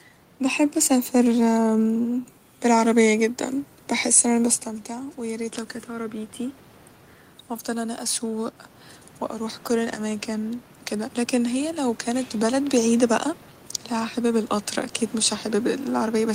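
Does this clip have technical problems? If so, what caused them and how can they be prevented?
Yes. From 9.37 to 13.24 s there's automatic gain rising: the AGC decided the input had gone too quiet and slowly turned itself up by about 4 dB over those four seconds, so the voice and the room noise swell together rather than the voice alone getting louder. The level change around four and a half seconds is just the talker moving, not the system. To prevent the gain ramp, turn off AGC and set a fixed input gain.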